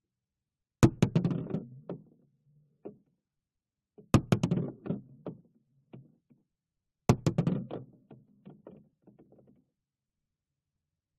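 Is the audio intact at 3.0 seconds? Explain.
Yes, the audio at 3.0 seconds is intact, with no dropout, click, distortion or other fault at that moment.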